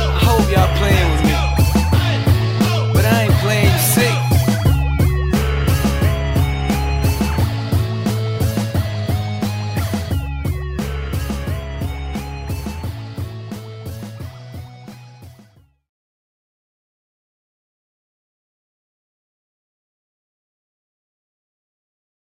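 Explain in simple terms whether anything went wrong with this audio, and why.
Listening closely, nothing went wrong with this audio; no problem stood out at any point.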